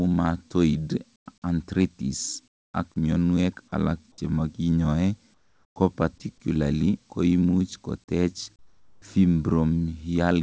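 At 1.16–1.26 s, 2.48–2.74 s, 5.34–5.76 s and 8.56–9.02 s, comfort noise replaces the background in speech pauses. The real room tone gives way to steady, featureless hiss about 18, 23, 9 and 13 dB quieter, likely from discontinuous transmission with receiver-generated filler noise.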